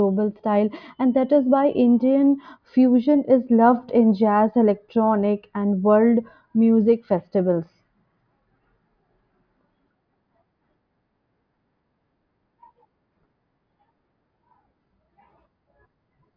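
Nothing in this bit of speech stands out as a technical fault anywhere along the way, so there's nothing to flag here.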